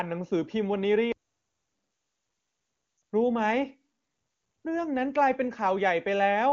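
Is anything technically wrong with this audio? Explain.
Yes, there are two faults in this speech recording.

From 1.12 to 1.75 s there is a playback stall. The output drops to silence for about 625 ms in mid-flow and then resumes. This most likely happens because the player's buffer ran dry or its audio thread was held up, so nothing was delivered to the output until data arrived again. The gap is silence, which is why it sounds like an abrupt halt.

From 2.97 to 3.01 s there is a short burst of lost AMR speech frames. The dropout lasts about 40 ms, which fits two consecutive 20 ms frames failing their checksum. The decoder fills the hole by repeating the last good pitch and vocal tract parameters at reduced gain. The result is a drop to near silence before normal decoding resumes. Outside this glitch, the wideband AMR coding carries the voice cleanly, with at most faint codec colouring.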